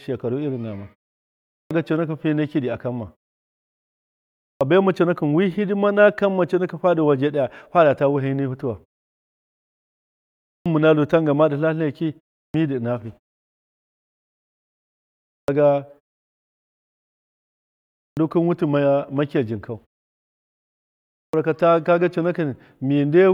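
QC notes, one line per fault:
1.59, 4.50, 10.54, 12.43, 15.37, 18.06 and 21.23 s, clipped start after a pause: after gaps of 0.31 to 2.26 s, the first 104 to 117 ms of speech goes missing. Words jump in without their opening sounds because the output device dozed off during the silence and needs that long to wake back up.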